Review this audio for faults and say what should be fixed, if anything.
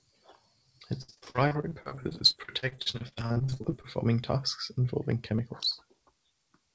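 From 1.02 to 3.86 s, just before "tasks involving", the speech turns choppy and robotic. This is repeated packet loss. Many short holes, the longest 63 ms, were each patched by stretching the last sound. About a third of that stretch is concealment. To prevent it, stabilise the network path or give the jitter buffer more headroom so packets arrive in time.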